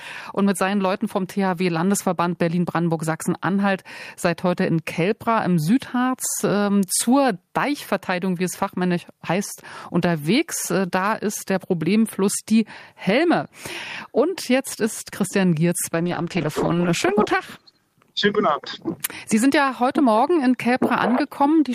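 A call bitrate drop runs from 16.02 to 18.53 s, apparently a fall in the bandwidth estimate that starved the encoder, which points to roughly 40 kbps sliding to about 11 kbps for around 1.2 s. The audio turns coarse, watery and dull-topped, then clears.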